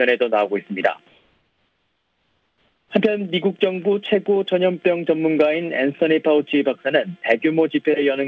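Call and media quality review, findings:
Background turns steady and featureless 1.08–2.90 s (1.82 s), about 2 dB quieter, against a bed about 50 dB below loud passages. Comfort noise in place of the background, likely sender DTX: frames halted, receiver synthesized shaped noise. Call path band stops at 8 kHz, pointing to G.722 wideband, 64 kbps.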